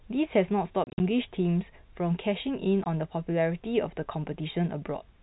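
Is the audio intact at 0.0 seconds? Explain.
Yes, the audio is intact at 0.0 seconds, with no fault at that moment.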